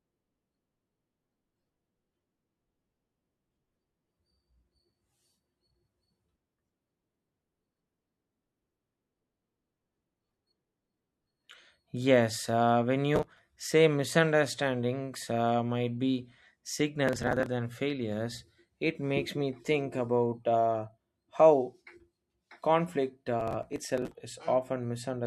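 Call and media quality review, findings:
Gritty crackle bursts tearing through the speech at 13.15–13.39 s, 17.08–17.46 s and 23.40–24.14 s. Processor overload crackle: audio thread missing deadlines on what sound like roughly 10 ms buffers, dozens skipped in a row, each leaving a hard-edged gap.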